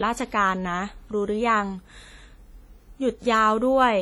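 All the way through, the speech rings and smears with hiss breathing along, likely heavy WMA compression, its smeared quantisation noise fitting a bitrate around 32 kbps.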